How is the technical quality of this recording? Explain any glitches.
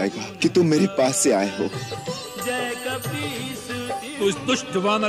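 No glitches turn up anywhere in this recording; every moment of it sounds just as it should, with nothing jumping out to explain.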